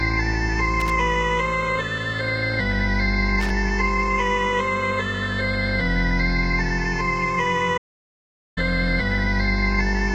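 At 0.8 to 0.9 s and again at 3.40 to 3.50 s, loose connector crackle appears: a dirty contact chops the signal, giving irregular scratchy bursts seen as jagged spikes and broadband vertical streaks. At 7.77 s a playback stall cuts the sound for about 0.79 s, likely from a data underrun, showing as a flat, empty gap until 8.58 s.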